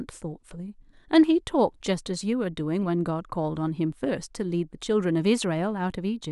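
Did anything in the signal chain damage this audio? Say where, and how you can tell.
No, nothing in the signal chain damaged this recording.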